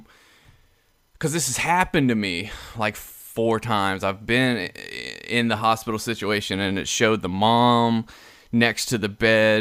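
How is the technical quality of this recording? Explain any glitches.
Nothing stood out as a technical problem on listening to this recording.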